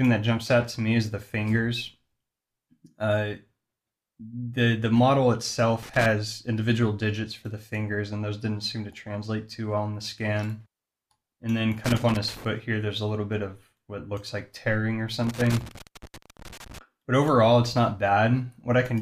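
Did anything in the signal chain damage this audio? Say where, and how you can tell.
Yes, there's loose connector crackle, so this happened in the analogue wiring, before the converter. You get irregular bursts of crackle and scratching at 5.83–6.06 s, 11.84–12.45 s and 15.24–16.78 s, with the last burst the longest at about 1.5 s. A worn or dirty contact is making and breaking fast as the cable or plug moves, which chops the signal on and off while it's disturbed.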